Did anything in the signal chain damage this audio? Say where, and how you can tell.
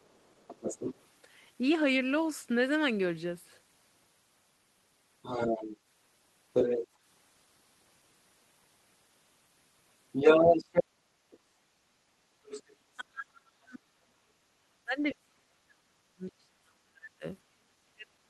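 Yes. The damage is in call processing, where the echo canceller likely left part of the loudspeaker signal in the microphone path, so the other side's voice is leaking through. A second voice appears at 0.02–1.05, 5.22–5.77, 6.53–6.87, 10.12–10.84, 11.31–11.39, 12.44–12.76 and 13.74–13.78 s. Its level swings from faint scraps far below the talker to passages around 10 dB louder than the talker.

From 12.96 s to the end, the talker's speech is suppressed in double talk. The canceller, likely unable to separate the near talker from the echo while both overlap, pulls the near voice down, with the deepest dips reaching about 40 dB. The near voice dips instead of holding a steady level, and the brief leaked fragment at 13.74 s falls inside this stretch.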